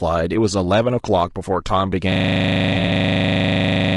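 Throughout the speech, the voice sounds rough and grainy, with noise filling the gaps between harmonics and a thin, synthetic-sounding top band. The likely cause is low-delay AAC compression, AAC-ELD. Its short frames resolve pitch harmonics poorly, and the damage is plainly audible at a rate around 32 kbps.

From 2.12 s to the end, a system hang loop takes over. The machine froze while the audio hardware kept replaying the same 40 ms ring buffer. That single slice repeats dozens of times, producing a steady 25 Hz buzzing stutter.

Between 2.73 s and 2.9 s, within that loop, there is AAC frame loss with concealment. About 60 ms of audio, consistent with three lost frames scattered over 160 ms, was rebuilt from earlier spectra. The gaps are each roughly 20 ms long and sound like brief smeared, noisy patches.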